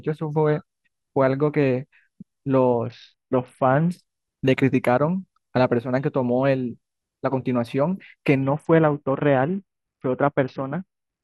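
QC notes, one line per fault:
2.86 to 3.90 s and 8.43 to 11.23 s: Bluetooth SBC bit pool drop. The link starved the encoder, so treble dulls and gritty quantisation noise rises, which fits a bit pool cut from 31 to 6, near 55 kbps. A spectrogram shows the upper bands blanking out.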